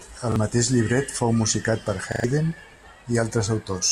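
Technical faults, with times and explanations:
0.32 s, repeated buffer: a 40 ms slice plays twice with a hard join just before "mateix llibret fou musicat", a brief stutter because fresh audio arrived late and the device replayed its last buffer.
2.12–2.24 s, repeated buffer: right after "llibret fou musicat per", the same 40 ms piece sounds four times in a row, a stammer that fits a 40 ms buffer looping while the stream stalled, dropping roughly a tenth of a second of audio.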